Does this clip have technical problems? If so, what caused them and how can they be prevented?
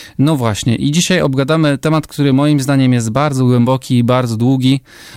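No, nothing technical gets in the way here, so there's nothing to trace back or guard against next time.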